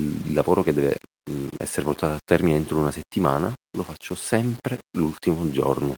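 This speech clip... no. Start differently.

Grainy, gritty distortion runs through the whole speech clip, clinging to quieter passages and fading edges, with error about 25 dB below the signal. The likely cause is low bit depth without dither: rounding to roughly 7 bits, so the error tracks the signal.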